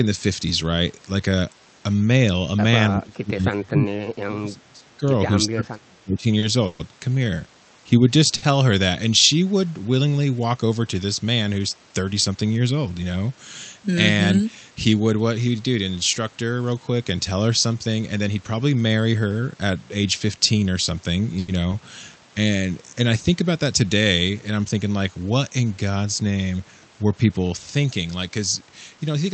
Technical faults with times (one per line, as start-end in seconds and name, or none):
2.95-5.02 speech suppressed in double talk
5.52-6.25 speech suppressed in double talk
6.39-8.52 repeated stalls (stutter)
12.13-12.45 jitter buffer speed-up
17.87-18.55 jitter buffer speed-up
21.39-21.50 short stall from a late packet
28.29-29.15 jitter buffer speed-up